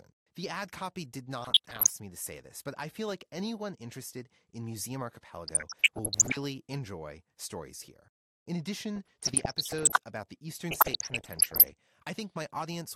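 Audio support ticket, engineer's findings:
MP2 compression, whole clip: dull top end with a granular gurgle on the speech, and upper sub-bands dropping in and out. Likely a Layer II encode at a low rate, around 80 kbps by ear. Constant throughout, unlike the burbling, which comes in bursts.

DAB burbling at 1.42–1.90 s (after "ad copy did", before "me to say this"), 5.47–6.37 s (before "enjoy stories here"), 8.96–9.97 s (before "about the") and 10.71–11.72 s: noise blips and level jumps in single sub-bands. Bit errors slip past error correction and corrupt sub-band levels frame by frame. The sound points to an error rate around 0.7%, worse in the last burst at about 1.5%. These are short, separate bursts, unlike the steady dullness of the codec.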